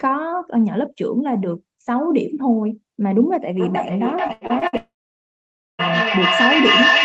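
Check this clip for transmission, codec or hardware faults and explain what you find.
Three faults appear in the second half of this speech clip, all overlapping between 3.57 s and the end.

Feedback echo between two devices, from 3.57 s to the end: a second device in the room replays the far end, and this microphone recaptures it. The speech returns roughly every 0.4 s, peaking about 4 dB above the direct speech, so the repeats build into a ringing pile rather than fading.

Repeated packet loss (robotic sound), from 4.27 s to 4.75 s: five short gaps, the longest 81 ms, were each patched by extending the preceding sound. About 41% of that half-second is concealment, giving a choppy texture with fragments missing.

Long network dropout, from 4.77 s to 5.81 s: a brief concealment tail decays, then about 0.89 s of silence follows before audio resumes, with over a second of material simply gone. 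A network outage is the likely cause.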